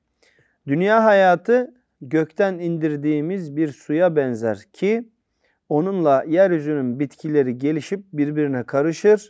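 No technical faults can be heard in this recording.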